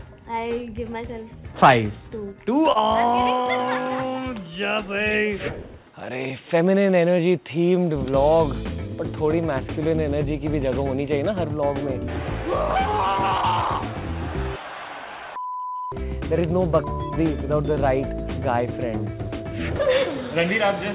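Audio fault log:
2.72 to 2.78 s, short concealed packet loss. About 30 ms of audio failed to arrive in time. The receiver patched the gap by extending the last sound it had, for about 27 ms, then crossfaded back into the real signal. This leaves a brief smear or wobble, and a short sound there can be lost. The patch sits inside the narrow call band, with nothing above 4 kHz, which fits a G.711 mu-law link.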